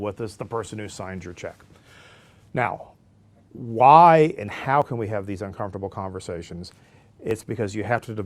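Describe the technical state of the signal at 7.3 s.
Audio missing between chunks at 7.31 s, right after "have these uncomfortable conversations": a few milliseconds of speech drop out and the two sides butt together with no gap. This is likely the processor losing a sliver while closing one 2.5 s chunk and opening the next.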